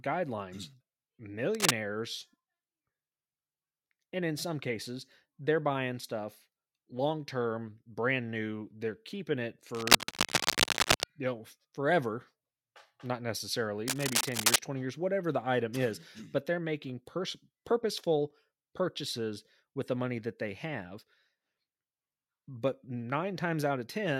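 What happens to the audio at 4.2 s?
Nothing goes wrong at 4.2 s; the audio there carries on intact, with no dropout, click or other fault.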